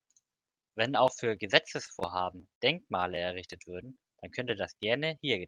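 Packets reached the receiver late and its jitter buffer repeatedly ran dry, causing repeated stalls (stutter) in this speech clip. Right after "auch für", from 1.77 to 2.63 s, ten short stalls are bridged by continuing the last sound, about 153 ms in all and none longer than 59 ms. A second, milder burst of four tiny stalls follows from 3.01 to 3.35 s. Nothing is lost, but the speech drags and catches. Then, to build up a reserve, the buffer performs a jitter buffer slow-down from 3.87 to 5.08 s, repeating single pitch periods to add about 73 ms. Speech runs at 95% speed with unchanged pitch, so sounds come out slightly drawn out.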